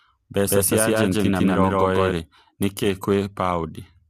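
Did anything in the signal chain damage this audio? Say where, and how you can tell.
Yes. At the codec stage, the whole clip sounds rough and grainy. Noise fills the gaps between the speech harmonics, and the top band sounds thin and synthetic. This is likely low-delay AAC compression (AAC-ELD). This roughness fits a low bitrate near 32 kbps.

A doubled audio track runs from 0.46 s to 2.12 s and starts just before "nĩ kĩ". A second full-band copy trails roughly 150 ms behind, about as loud as the original. It starts and stops abruptly and has no room decay. That points to a slower second capture path or an edit that likely left two copies out of step.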